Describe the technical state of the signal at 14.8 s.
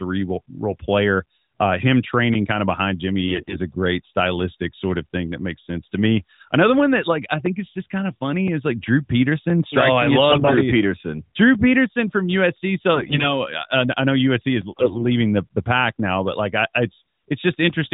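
AMR bit errors from 14.72 to 15.06 s: flipped codec bits misplace excitation pulses, making the voice hoarse and gargly; spectrograms show smeared, broken harmonics below 4 kHz.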